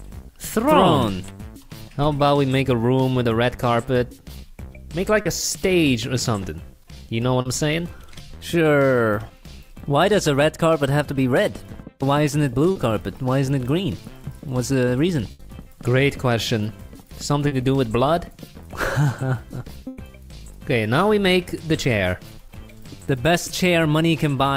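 The audio has packet loss on a network path, with the receiver's concealment covering the gaps. Short concealed packet loss occurs at 5.21, 7.41, 12.71 and 17.47 s. Each time about 40 ms failed to arrive and was replaced by an extrapolation of the preceding sound, heard as a brief smear or wobble before the real signal blends back in. Two longer bursts of packet loss occur at 15.31–15.41 s and 19.87–19.99 s, covering about 80 ms and 100 ms. Here the concealment holds and fades the last sound across the hole, then playback resumes with that stretch of content missing.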